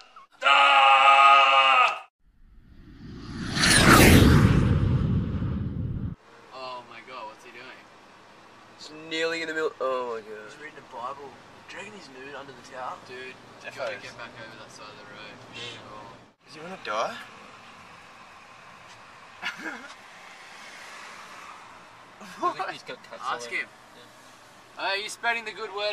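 No technical faults are audible anywhere in the recording.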